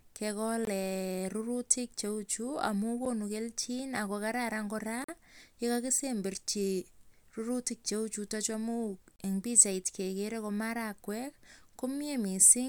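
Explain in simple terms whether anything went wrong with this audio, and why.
The speech drops out four times, a fault called a block of digital silence. It happens at 0.65 to 0.67 s, at 3.05 s, at 5.04 to 5.08 s, and at 9.16 to 9.19 s, just before "eng pikchait kekere ko". A chunk of sound was replaced by silence, likely because the program didn't deliver audio in time.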